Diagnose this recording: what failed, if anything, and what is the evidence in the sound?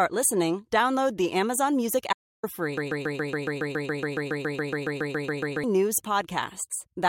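An audio dropout to silence runs from 2.13 to 2.43 s, about 0.3 s of flat silence on the waveform, with no room tone. Likely an input link or driver lost its signal.

A broken-record loop runs from 2.78 to 5.64 s: one 139 ms fragment repeats 21 times, showing as identical tiled blocks on the spectrogram. Likely a stalled stream or playback buffer.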